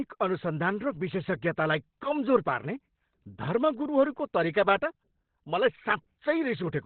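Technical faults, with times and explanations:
Throughout, Opus compression: the encoder was likely starved of bits and dropped into its SILK speech mode, consistent with roughly 12 kbps, so the band narrows with nothing above 4.3 kHz, leaving the speech heavily muffled and hoarse.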